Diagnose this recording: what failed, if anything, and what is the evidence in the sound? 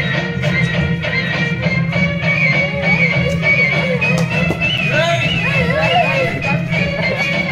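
The driver or buffer stage failed: once, the output buffer was not filled in time, so a run of samples went out as zeros, a block of digital silence. At 4.78 s the sound drops to silence for about 7.3 ms and returns abruptly, with no fade at either edge. Each hard edge is a step in the waveform, so the dropout sounds like a single sharp tick rather than an audible hole.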